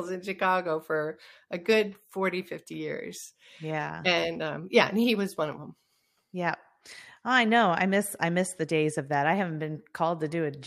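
No technical faults are audible.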